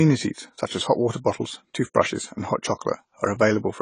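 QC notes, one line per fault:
Throughout, AAC compression: speech sounds dull and smeared, with a warbling fizz on sibilants and a lowered top end. Likely low-bitrate AAC-LC, fitting about 24 kbps, starving and dropping bands. A spectrogram shows a hard ceiling with patchy holes below.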